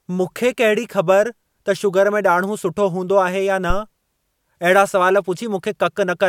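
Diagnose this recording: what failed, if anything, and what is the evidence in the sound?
Phantom power thump in the analogue input, 3.70 to 3.83 s, peaking about -7 dBFS. A supply step crossed the coupling capacitors and decayed in 29 ms.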